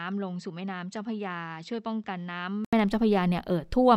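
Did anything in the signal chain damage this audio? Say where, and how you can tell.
Yes. At the input device stage, the input likely switched to a poorer device, and for the opening 2.73 s the speech runs through it. Nothing reaches above 8 kHz in that stretch, so the speech sounds dull and boxy. It sits about 10 dB lower, with a different noise floor roughly 50 dB down. At 2.73 s an 80 ms silence marks the switch back, and the full bandwidth and level return at once.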